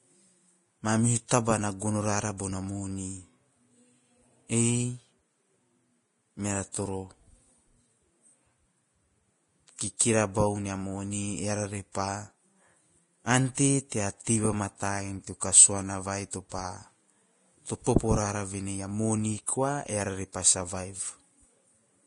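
Throughout the 22-second speech clip there is a hissy, grainy treble with nothing at all above 10.6 kHz. This is Vorbis compression at heavy settings, likely at around 30 kbps. The codec keeps a smooth outline of the spectrum but quantises the fine detail on top so coarsely that upper harmonics dissolve into noise of similar energy. On a spectrogram the display goes blank above a hard shelf at 10.6 kHz, and the band beneath it looks speckled rather than cleanly striped.

Pre-echo appears at five sharp onsets. At 2.37 s, between "na gono rara" and "bona moni", a short hiss lasting about 21 ms leads into the attack. The same happens at 6.72 s (27 ms), at 16.31 s (25 ms), at 17.84 s (24 ms) just before "popo rara", and at 19.46 s (18 ms) just after "o moni". Each time, quantisation noise sized for the loud attack has been spread across the whole transform block, including the quiet part before it, so the onset sounds smeared. 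On a waveform a low fuzz rises just ahead of the transient. On a spectrogram a thin broadband smudge precedes the attack's vertical edge.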